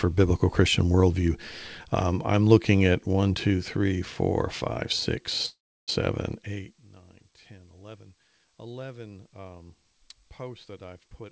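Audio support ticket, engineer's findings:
Call audio freeze, 5.46–5.90 s. Likely packet delay draining the jitter buffer. Receiver stretches last sound into a fading buzz or hiss, then about 330 ms silence. Playback resumes where it stopped: 418 ms gap inserted, nothing lost, latency up 418 ms.

Jitter buffer speed-up, 11.08 s to end, right after "um posts". Buffer overfilled, so the receiver trims pitch-period slices repeatedly, roughly 100 ms in total. Audio runs at 132% speed, pitch unchanged, sounds hurried. G.722 band stops at 8 kHz.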